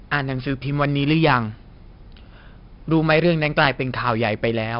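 Throughout the speech, a gritty hiss rides on every loud passage and nothing reaches above 5.4 kHz, leaving it dull. This is heavy 4-bit ADPCM compression: each sample is a coarse 4-bit step from a prediction, consistent with roughly 44 kbps.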